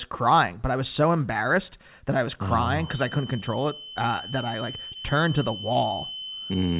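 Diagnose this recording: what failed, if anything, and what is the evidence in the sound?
A feedback whistle starts at 2.76 s, right after "that I was oh", and lasts to the end. It is a thin, steady 3 kHz tone well below the speech, wavering slightly. The likely stage is acoustic: a loudspeaker-to-microphone loop sitting at the feedback point.

Short stalls from late packets occur at 3.40, 4.93 and 5.73 s. Each holds the sound for 20 to 24 ms, with nothing lost. The stage is the network. A packet arrived late, the jitter buffer ran dry, and the receiver stretched the last sound until it came.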